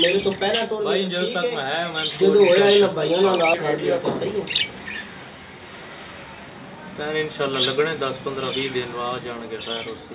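At 3.54 to 3.56 s the audio does a skip ahead. Roughly 0.4 s of sound was dropped, and nothing fills the gap. The two sides of the cut join almost directly, so playback lurches forward. Its latency drops by about the same amount.

From 3.76 to 5.16 s comes a jitter buffer speed-up. The buffer held too much audio. It trimmed short pitch-period pieces again and again, about 150 ms in total. The sound runs at 111 percent speed with unchanged pitch and feels hurried. Throughout, the G.711 call path leaves nothing above 4 kHz, giving a narrowband tone.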